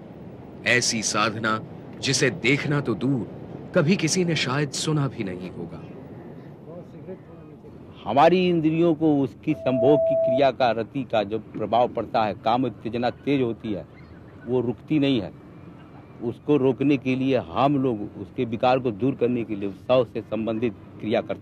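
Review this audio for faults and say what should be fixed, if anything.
Loudspeaker feedback squeal, 9.49 to 10.41 s: the microphone picked up its own loudspeaker, loop gain passed one at 656 Hz, and that tone swelled within about a third of a second to roughly 5 dB above the sound. A spectrogram shows one bright line at 656 Hz, and the waveform thickens into a steady sinusoidal band. Lowering loudspeaker gain near the microphone or notching 656 Hz would prevent it.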